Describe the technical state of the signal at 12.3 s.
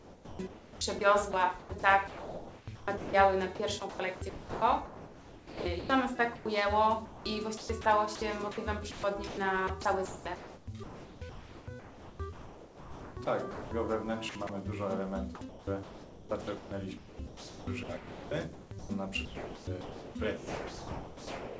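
At 12.3 s the sound is choppy, under an 8 kHz ceiling. It sits inside a stretch from 7.05 to 13.71 s of sound chopped by the voice detector, likely switching transmission on and off so that about 3.5 s was replaced by comfort noise.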